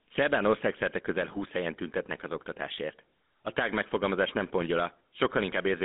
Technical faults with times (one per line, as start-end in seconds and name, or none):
0.00-5.85 GSM full-rate codec